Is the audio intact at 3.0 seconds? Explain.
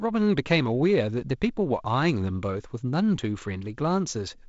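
Yes, the speech at 3.0 seconds is intact, carried through G.722 wideband telephone coding with nothing above roughly 7.7 kHz.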